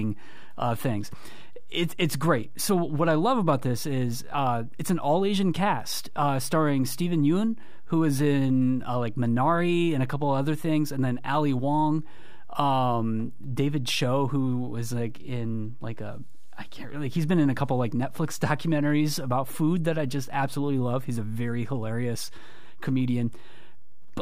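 A speech recording carrying a DC offset for its full length: the entire waveform sits displaced from zero by a constant of about -31 dBFS. Unlike hum or rumble, it neither pulses nor varies, appearing only as steady energy at zero hertz and lost headroom.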